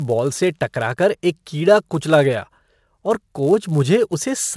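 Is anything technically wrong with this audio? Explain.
Yes. The speech carries a fault from a resampler restarted on every block, and it runs throughout the clip. The audio was converted from 48 kHz down to 24 kHz in separate 10 ms chunks. Each chunk was processed without its true neighbouring samples. So every chunk edge gets a small error. Those errors repeat at 100 Hz. The result is a low buzz riding on the speech. It is present only while sound is present.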